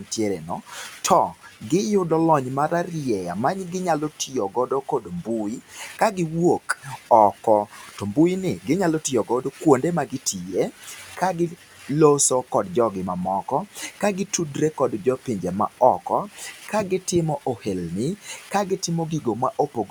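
The noise suppressor in this speech clip mistakes parts of the speech for noise and turns them down by up to about 12 dB, cutting speech from 0.0 to 1.71 s before "giyudo lony mararieya maginyalo", from 4.1 to 6.17 s, from 6.78 to 11.89 s, and from 13.66 s to the end after "jogi mamoko", so soft sounds and word endings come out faint or swallowed. Room noise sits about 28 dB below the speech.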